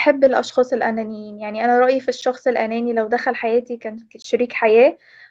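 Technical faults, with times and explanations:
2.21 s and 4.22 to 4.24 s: gap between stream segments. Two hard-edged holes of silence cut into the speech, about 10 ms and then 20 ms long. They fall 2 s apart, at segment boundaries. The segment timestamps leave a gap, which the player fills with silence. No audio is lost.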